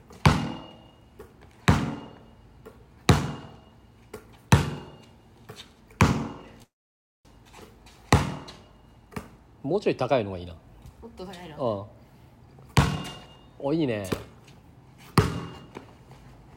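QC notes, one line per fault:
6.63–7.27 s, call audio freeze: last sound smears briefly, then 0.57 s of flat waveform and blank spectrogram, likely delayed packets; audio resumes intact, nothing lost.
12.47–12.97 s, jitter buffer speed-up: sound hurries to 110% speed, same pitch, about 50 ms trimmed; spectrogram shows events squeezed closer, harmonics unshifted.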